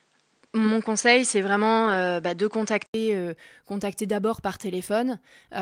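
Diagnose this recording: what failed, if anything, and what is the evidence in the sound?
Input switched to a poorer device, likely, at the driver stage: from 0.0 to 2.94 s the speech is band-limited, with nothing above 9.4 kHz, and a new noise floor about 45 dB down. An 80 ms silence and a level jump of about 5 dB precede "euh contacter d'abord par".

Lost packet rebuilt from error correction, at the network and codec stage: from 1.85 to 1.95 s the speech turns rougher and noisier for about 60 ms, which fits three separate 20 ms packets replaced by their low-bitrate copies carried in the following packets.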